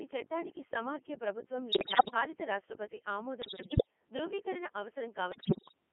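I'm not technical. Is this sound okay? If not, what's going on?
No. The whole clip sounds robotic and buzzy, like a synthetic copy of speech. That is the Codec 2 vocoder, a digital radio system that sends only a rough description of the voice (pitch, loudness, tone) and rebuilds it from scratch at the other end.

In three places the voice breaks into warbles, bleeps and gibberish, jumping in pitch and loudness. This happens from 1.72 to 2.14 s, right after "చట్టానికి సమాఖ్య ప్రభుత్వం" and before "భారత రాష్ట్రపతి"; from 3.42 to 3.87 s, just after "భారత రాష్ట్రపతి"; and from 5.32 to 5.74 s. These are bit errors on digital voice radio. A weak signal corrupts the tiny data stream, so the rebuilt voice comes out wrong.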